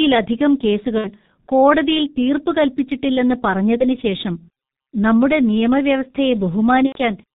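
Throughout, the speech carries heavy G.723.1 codec damage. Everything above 4 kHz is gone, consistent with a low-rate telephony coder running at about 6.3 kbit/s. The voice model updates only every 30 ms frame, so consonants smear and the tone turns muffled and hoarse. A spectrogram shows a hard ceiling at 4 kHz with blocky, smeared formants. The waveform looks coarse, with transients rounded off.

At 0.98 to 1.10 s there is VoIP packet loss concealed by the speech codec. The gap sounds like about 60 ms of missing audio, two lost frames. The decoder stretches its last pitch and filter into a buzzy tone or coloured noise that fades. The sound stays weak past the gap while the decoder's state recovers. The spectrogram shows flat, repeated frames, and the waveform shows a decaying envelope.

The same concealment recurs at 3.78 to 4.01 s, after a single lost frame of about 30 ms. It happens again at 6.86 to 6.98 s, where about 90 ms is lost, which points to three frames, and the sound there is muted from the third lost frame.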